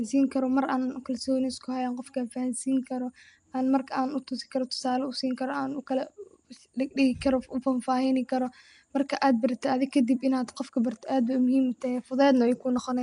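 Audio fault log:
throughout, Nellymoser compression: the speech was likely coded with Nellymoser Asao, at a rate that fits around 44 kbps. Its fixed two-bit-per-sample budget leaves weak bands noise-filled, giving a plainly audible rough, hissy halo and smeared, underwater blur, with nothing above 10.6 kHz.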